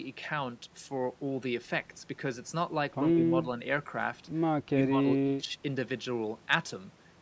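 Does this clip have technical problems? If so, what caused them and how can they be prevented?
Yes. The speech dips by about 10 to 20 dB at 3.14–3.18, 4.68–5.03 and 5.23–5.51 s, likely speech suppressed in double talk: the echo canceller mistook overlapping talk for echo and attenuated it. These are partial dips rather than clean dropouts, and that pattern separates them from packet loss. Better echo-canceller double-talk detection, or headsets that keep loudspeaker sound out of the microphone, would prevent it.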